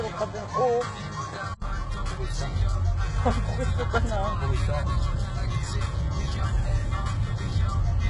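From 0 to 1.62 s the sound is quieter, dull and band-limited below 8.6 kHz with faint added background noise, likely an input switched to a poorer device, ending in an 80 ms silence. Throughout, nothing passes above 11 kHz and the treble sounds gritty and metallic, pointing to heavy HE-AAC compression at a very low bitrate.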